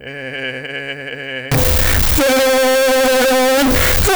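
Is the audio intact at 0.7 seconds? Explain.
Yes, the music is intact at 0.7 seconds, with no dropout, click, distortion or other fault at that moment.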